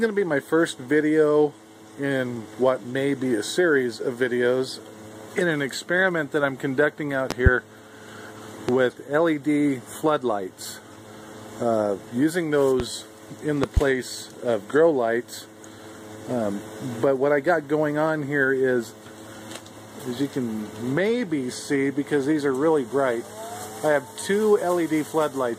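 Loud pops break in four times: a double pop from 7.31 to 7.49 s, single pops at 8.69 to 8.72 s and 12.80 to 12.83 s, and another double from 13.64 to 13.80 s, peaking about 20 dB above the sound for the doubles and about 15 dB for the singles. The likely cause is a sudden voltage step, such as static or a switching glitch, that the circuitry rounds into a brief thump while the sound continues beneath. In the waveform each appears as a tall, narrow spike, and in the spectrogram as a thin vertical stripe across all frequencies.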